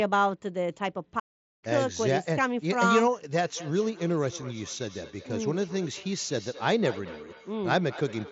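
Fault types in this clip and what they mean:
Playback stall: At 1.19 s the speech cuts out mid-flow and the output sits silent for about 430 ms, picking up again at 1.64 s. That gap most likely comes from the player running dry of data or having its output thread held up, so nothing reaches the speaker until it catches back up.
Feedback echo between two devices: From 3.35 s to the end, each bit of speech comes back around every fifth of a second or so, thinner and a bit ringy, peaking at about 18 dB below the speech itself. That's two devices in the same room on one call, one replaying what the other's mic sent. Each device's echo canceller only strips its own playback, so the loop survives.
Concealed Bluetooth headset packet loss: At 4.43 s there's a single dropout of about 7.5 ms in the link between headset and phone. The receiver papers over it by repeating the best-matching slice of the audio just before, so it's nearly invisible. 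With only one loss here, there's no run long enough to turn into the held buzzy tone you'd get from repeated drops.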